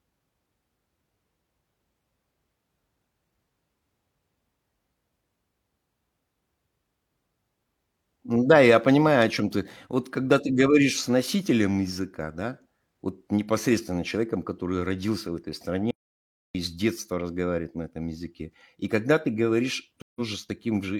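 At 15.91 s, just after "который родился в этой", the speech cuts to total silence. This is an audio dropout to silence. No room tone remains. The input was likely lost while silence was written. Speech returns at 16.55 s with "с детства разговаривает на", after about 0.64 s missing.

At 20.02 s a stream reconnect occurs. The connection broke and the player went quiet for 138 ms. It then restarted its decoder. Speech resumes at 20.20 s, at about the same point.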